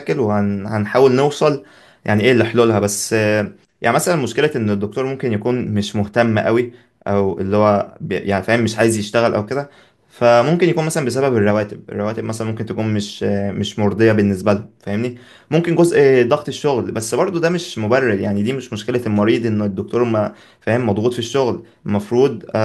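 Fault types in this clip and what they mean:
No technical faults can be heard in this recording.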